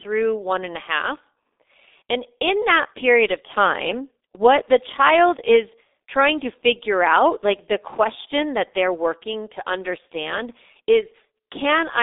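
Throughout, the speech carries G.723.1 codec damage. The band runs from 300 Hz to 3.7 kHz. Heavy, slow low-bitrate coding, fitting about 6 kbit/s, leaves it muffled, hoarse, with smeared consonants.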